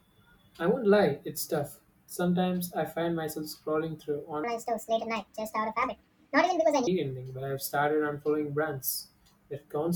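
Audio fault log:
4.44–6.87 s, section at the wrong speed: for about 2.4 seconds the speech abruptly turns high and hurried. It runs 1.53 times faster and rises by about seven semitones, then snaps back to its normal pace and pitch at 6.87 s. Because speed and pitch shift together and recover together, this stretch was likely played out against the wrong clock, squeezing each second of the recording into roughly two-thirds of a second.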